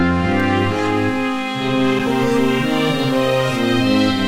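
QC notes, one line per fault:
0.40 s and 1.99 s: block of digital silence, twice. The signal drops straight to silence for about 2.5 ms and then 5 ms before snapping back, with no fade at either edge. That points to the output buffer not being filled in time. Both holes are so short that you hear them as quick ticks rather than gaps. The second is about twice as long.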